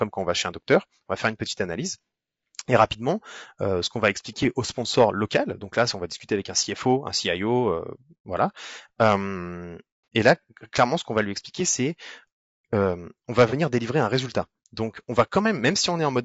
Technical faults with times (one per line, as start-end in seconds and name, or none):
0.00-16.25 low-delay AAC compression
10.04-10.06 AAC frame loss with concealment
13.49-13.54 AAC frame loss with concealment